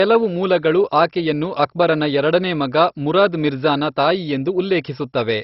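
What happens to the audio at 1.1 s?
At 1.1 s you're hearing the same damage that runs through the whole speech clip: heavy MP2 compression, likely at a very low rate like 32 kbps. With so few bits, the upper sub-bands get shut off, leaving nothing above about 5.6 kHz, and the remaining bands are coarsely quantised, so it sounds dull, gurgly and grainy.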